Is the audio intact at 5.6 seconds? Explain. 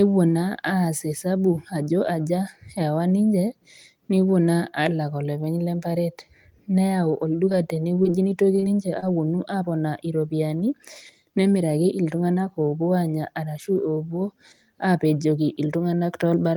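Yes, the audio is intact at 5.6 seconds, with no audible dropout, click, distortion or other fault at that point.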